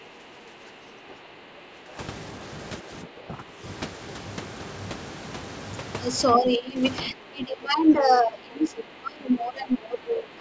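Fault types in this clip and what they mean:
Speech suppressed in double talk: the speech sinks in level in four stretches, by about 10 dB at first and up to about 25 dB over the last three seconds. The likely cause is an echo canceller turning the talker down while the far side spoke too.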